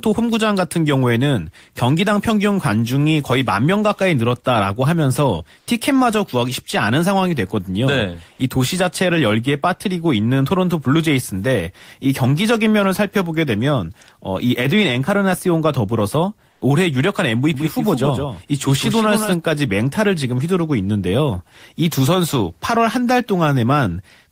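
Comfort noise in place of the background appears in this speech recording at 5.59–5.67 s and 16.51–16.61 s, gaps of 80 ms and 100 ms where the real room sound gives way to a flat, textureless hiss, about 11 dB and about 2 dB quieter than the surrounding background, likely because an Opus-style discontinuous transmission mode paused sending and the receiver synthesised noise. An onset clipped by the voice detector follows at 5.65–5.67 s: the first 20 ms of the returning sound is missing, so it starts abruptly, with filler noise where its soft beginning should be, likely because the detector reacted late. A doubled audio track runs from 17.54 to 19.34 s, a second full-band copy some 5 dB quieter trailing around 150 ms behind, with no reverberant decay and hard start and stop edges, likely from a second, slower capture path or an overlapping edit.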